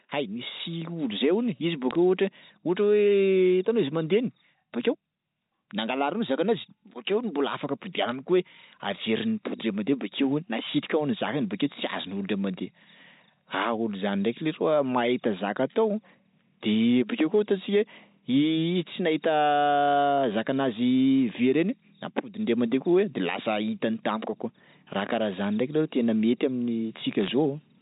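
Flipped bits on the G.711 mu-law line, which itself carries the speech at 64 kbps, corrupt individual samples in three short bursts, at 1.91 to 1.95 s, 8.09 to 8.12 s, and 27.21 to 27.28 s. The bit error rate is a few tenths of a percent, and each burst points to only a handful of damaged frames. Where a sign or high-order bit is struck, that sample jumps, producing sharp ticks heard as a brief crackle over the unchanged speech.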